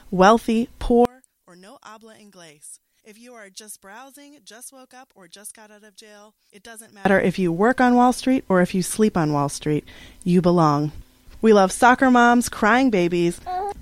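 From 1.05 s to 7.05 s the audio drops sharply, and the likely cause is one channel inverted: one side of the stereo pair has its polarity flipped, so whatever both channels share cancels when they are combined to mono. Over those six seconds the level falls by about 28 dB, leaving only a faint residue made of the small differences between left and right, with centred content nearly gone.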